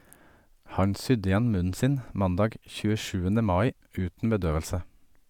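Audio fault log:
No fault can be heard anywhere in this speech recording. Nothing in the sound calls for a log entry.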